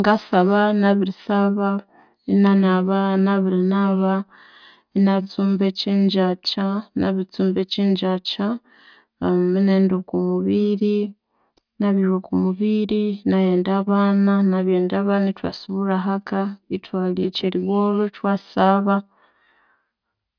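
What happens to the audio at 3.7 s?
Nothing goes wrong at 3.7 s; the speech there plays through without any dropout, click, distortion or other fault.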